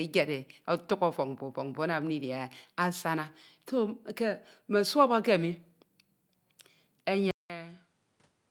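At 7.31 s the speech cuts out for about 0.19 s and resumes through what is likely an input switched to a poorer device, a change of microphone or a headset's call profile mid-recording. From there to the end the band stops near 11.4 kHz, so the speech sounds duller and more closed-in. The level falls by roughly 10 dB, and a new background noise sits faintly beneath the speech, around 35 dB down.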